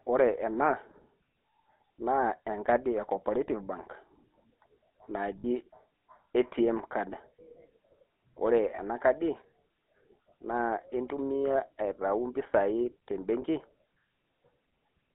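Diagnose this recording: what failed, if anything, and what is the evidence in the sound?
The damage sits at the codec stage across the whole recording. The speech has the buzzy, gravelly roughness of the GSM full-rate codec. The line band runs only from 250 Hz to 3.7 kHz, and the coarse quality fits a 13 kbps GSM stream. A plain low-pass filter or a narrowband line would dull the sound without this grain. Here the grain comes from sparse pulse excitation driving a vocal-tract model, with only every third excitation sample kept.

Lost GSM frames are a network or transmission fault, heard at 5.38 to 5.65 s, 8.76 to 8.79 s and 13.42 to 13.44 s. At each point the sound freezes into a rough, metallic ring as the decoder reuses the last good frame's settings. The first event fits about 60 ms of missing data, three 20 ms frames. The other two fit one frame each. A buffer dropout would give silence or a click rather than this held tone.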